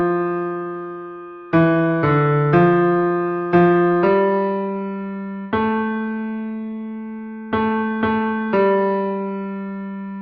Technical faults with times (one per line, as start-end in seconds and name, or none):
none